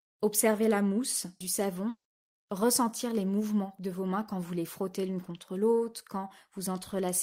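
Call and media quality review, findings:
Long network dropout, 1.89 to 2.07 s: speech smears into a fading buzz, then about 90 ms of silence; roughly 160 ms lost. Likely packet loss, jitter buffer concealing then giving up.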